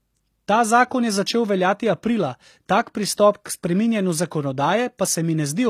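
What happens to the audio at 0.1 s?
At 0.1 s the speech is already carrying HE-AAC compression damage, which runs through the whole clip. The encoding likely kept only the lower spectrum and rebuilt the treble by copying lower bands upward under a coarse envelope, a scheme that fits a bitrate around 24 kbps. The top end stays bright but isn't the original, so its harmonics don't line up with those below, and s sounds come out plainly gritty, metallic or lispy.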